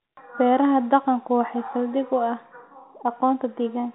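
No faults are audible in this speech; it carries the band limit of G.711 telephone coding, with nothing above about 3.9 kHz, as expected for that format.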